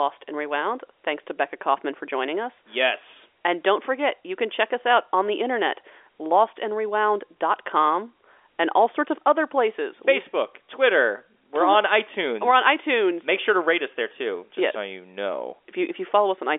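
No technical faults can be heard; the speech sits in an ordinary telephone band with nothing above about 3.7 kHz, as expected from G.711 A-law telephone coding, and any coding damage is faint at most.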